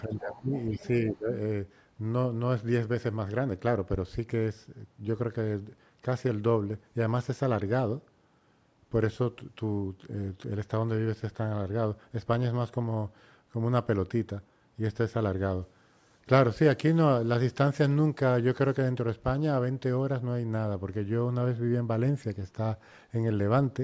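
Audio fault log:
0.0–0.16 s, 0.32–0.38 s and 0.54–0.88 s, other side's voice leaking through: faint second voice sits about 20 to 25 dB under the speech, likely residual loudspeaker echo the echo canceller missed.
0.06–0.51 s and 1.15–1.29 s, speech suppressed in double talk: the talker dips by up to about 20 dB, likely the canceller ducking both sides during overlap.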